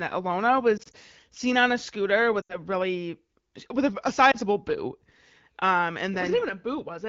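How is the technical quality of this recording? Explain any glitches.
The recording has short audible glitches. The speech comes through clear wideband HD Voice coding, but it has lost AMR speech frames at 0.77 to 0.96 s, 2.41 to 2.59 s and 4.31 to 4.36 s. Radio errors corrupted the frames. The decoder then repeated its last good settings at falling level. The first and last gaps sound like a brief dip or warble.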